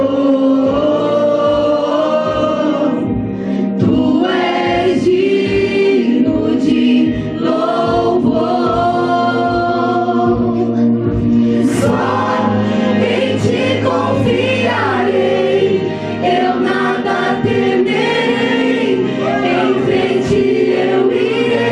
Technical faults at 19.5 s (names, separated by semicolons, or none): none